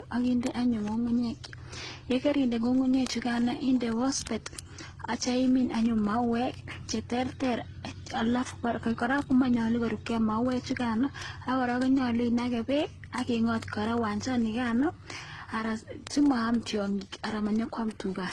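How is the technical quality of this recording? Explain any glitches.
The technical quality is poor. Two faults run through the recording, one in the timbre and one as a steady stream of clicks.

Transcoding between lossy codecs affects the whole clip. Nothing is present above 12 kHz, and the speech carries a mix of different codec artefacts heard together. That combination points to the audio having likely passed through several lossy codecs in sequence. Each stage re-encoded the previous stage's artefacts and added its own, and the lowest bandwidth limit in the chain persisted to the end.

Word clock ticks start at about 0.12 s and continue to the end of the clip, roughly every 30 ms, which adds up to several hundred ticks. They come from a digital link read by a receiver running on its own clock instead of locking to the sender. The two clocks differ by something like 700 ppm. Each time they slip past one another, a single sample is dropped or repeated, and the discontinuity is heard as a sharp tick of uneven strength at a steady rate, like a buzz under the speech.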